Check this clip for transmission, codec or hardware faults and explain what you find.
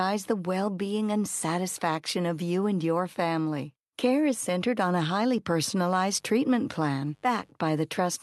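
One hardware fault stands out, mains buzz, from 6.04 to 7.54 s. During that stretch, a dimmer, rectifier or unshielded lead is letting sharp switching spikes into the audio twice per 50 Hz cycle. Their harmonics stack up into a steady, raspy buzz, faint and well below the speech. The speech itself carries the usual coding texture of an Opus call path, with its top end stopping near 12 kHz.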